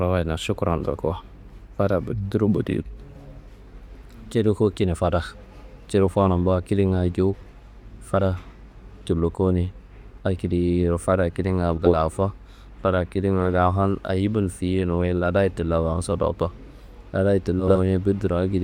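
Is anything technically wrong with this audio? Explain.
Yes. There are frames out of order at 7.34–7.50 s, 11.78–11.96 s and 17.60–17.76 s. Two adjacent 80 ms blocks, which fits runs of four frames each, swap places. The speech garbles into a brief flutter. Unlike a dropout or skip, no time goes missing.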